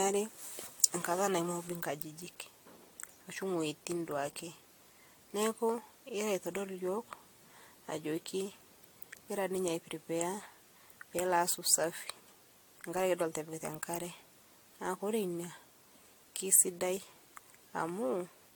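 Generation loss runs through the whole speech clip: the sound is swirly, smeared and hollow, with blurred consonant attacks. The likely cause is repeated lossy re-encoding, around five passes, which fits AAC-LC at 96 kbit/s, each pass re-quantising on a shifted frame grid.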